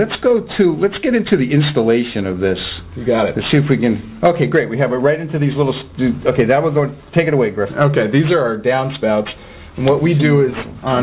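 Aliasing runs through the whole clip: the audio stops sharply at 4 kHz, which points to a drop from a full-band rate to about 8 kHz with no low-pass filter first. Everything that lay above 4 kHz was mirrored back down below it, landing at unrelated frequencies about 20 dB under the wanted sound. That folded energy gives the high end a gritty, metallic edge, and the spectrum stays dense right up to the cut-off.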